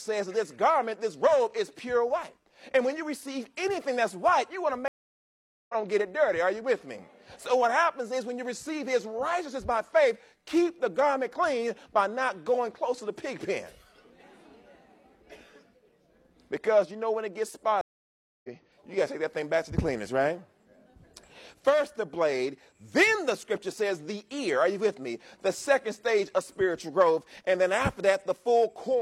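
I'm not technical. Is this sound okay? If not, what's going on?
No. There are two stream reconnects. At 4.88 s the sound cuts out for 0.81 s and comes back at 5.75 s. At 17.81 s it drops for 0.63 s and returns at 18.49 s. Each time, the connection broke and the player had to reconnect and start playing again. It doesn't pick up where it stopped. It jumps ahead, by about half a second the first time and about a third of a second the second time.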